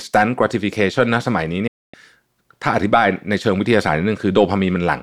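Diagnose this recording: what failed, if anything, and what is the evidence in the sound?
A digital broadcast dropout at the reception stage: from 1.67 to 1.94 s the speech fades out over about 8 ms into silence, then resumes with the intervening material gone. The receiver muted on lost or corrupt frames, fitting roughly eight. Spectrogram: clean full-band blank column.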